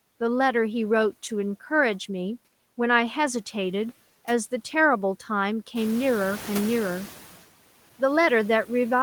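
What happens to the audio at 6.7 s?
The noise suppressor is catching up, from 5.75 to 7.33 s. The room noise jumps by about 13 dB around 6 s, and the suppressor's noise estimate takes about 1.6 s to follow. The background therefore comes through louder, cut by only about 7 dB, then sinks. Unlike the residue heard throughout, this is a temporary swell that fades.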